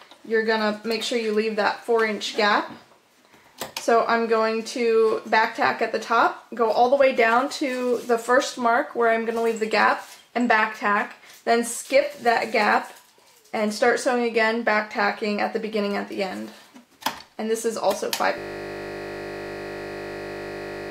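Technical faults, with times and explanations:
18.38 s to end: system hang loop. The audio freezes and a 20 ms slice repeats exactly, over a hundred times, until the clip ends. A buffer this short recycles at 50 Hz, so instead of stuttering it comes across as a steady, hard-edged buzz at that rate.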